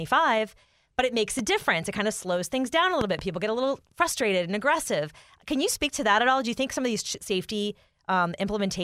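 Speech with two loud pops: a single sharp pop at 1.39–1.41 s after "but it makes a", then a double pop at 3.01–3.21 s after "slows things down a", each roughly 10 dB above the speech, likely voltage transients from a plug, switch or static discharge.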